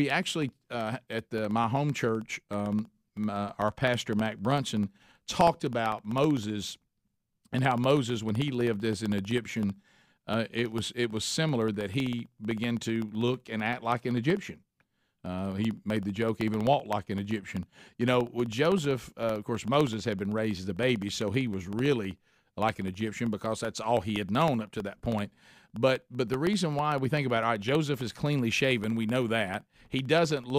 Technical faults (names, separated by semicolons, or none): periodic USB or driver dropouts